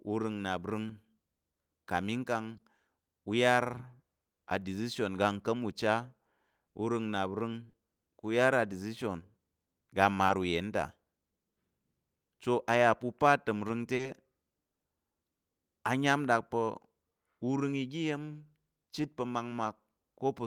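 Short concealed packet loss: audio packets arrived too late to decode, and the receiver extrapolated over the gaps, covering 20 ms at 0.87, 2.57 and 10.27 s and 40 ms at 7.69 and 13.95 s. Each gap comes through as a brief smear or wobble.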